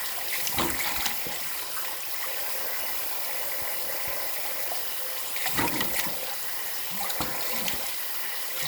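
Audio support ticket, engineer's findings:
Jump at 2.26 s, 5.72 s and 6.66 s, each an abrupt skip forward in the sound and no gap of silence. Roughly a tenth of a second skipped at 2.26 s and 6.66 s, a few tens of ms at 5.72 s. Likely a dropped buffer (overrun) in the capture path: the app didn't read the input buffer before the hardware overwrote it, so that block was lost and the surrounding audio was spliced end to end.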